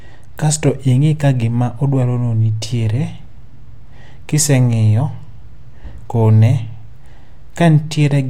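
Speech with no audible faults.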